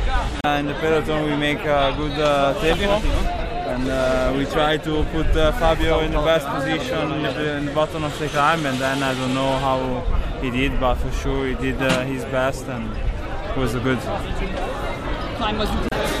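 At 0.41 to 0.45 s, 2.71 to 2.76 s and 15.87 to 15.93 s, brief glitches of about 50 ms each mark damaged data in a compressed stream. Corrupted bytes make the decoder misread those frames and lose sync until it finds a valid header.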